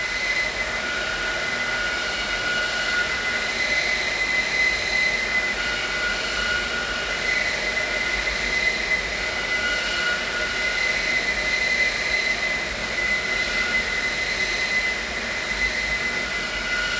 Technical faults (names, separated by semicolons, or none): none